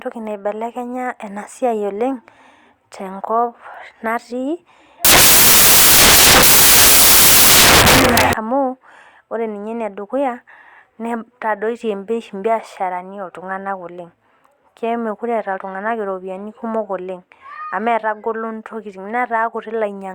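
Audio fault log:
5.05–8.33 s, samples built from the wrong bytes: the reader misassembles each sample's bytes, through a byte offset, swapped order or wrong alignment, so the rapidly changing low bits land in the most significant position. For these 3.3 seconds the speech turns into loud, harsh broadband noise, close to white on the louder passages.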